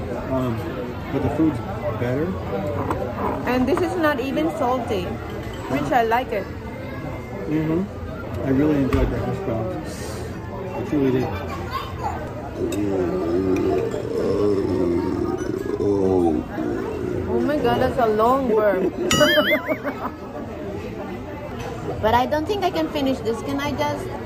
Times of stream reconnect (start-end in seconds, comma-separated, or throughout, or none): none